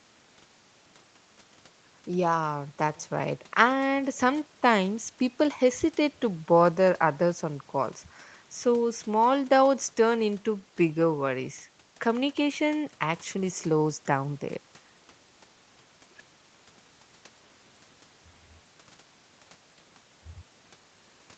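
Nothing here stands out as a fault: the top end of the speech stops at about 8 kHz, which is just what a normal call path running through an Opus codec gives you.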